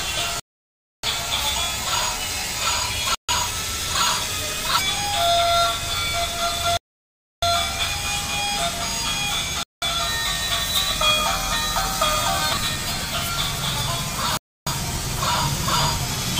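The sound drops to silence at 0.40 s for 0.64 s, at 3.15 s for 0.14 s, at 6.77 s for 0.65 s, at 9.63 s for 0.19 s and at 14.37 s for 0.30 s, each time resuming abruptly. These gaps are likely Bluetooth stalls, where delayed packets let the receiver's buffer run dry.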